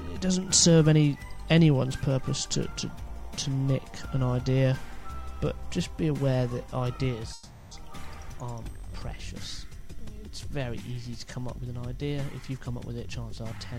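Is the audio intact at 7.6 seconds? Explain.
No, 7.6 s falls in a call audio freeze from 7.33 to 7.73 s: the last sound is stretched into a fading buzz or hiss for about 380 ms, likely while delayed packets left the jitter buffer empty, and then playback resumes with nothing lost.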